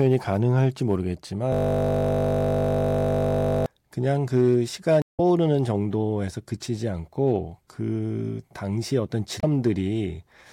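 From 1.52 to 3.66 s a steady 50 Hz buzz replaces the speech: a 20 ms slice repeating over a hundred times, the system hang loop replaying a stuck ring buffer. Brief disruptions at 5.01 to 5.20 s and 9.39 to 9.44 s come from damaged data in a compressed stream, where the decoder lost frame sync.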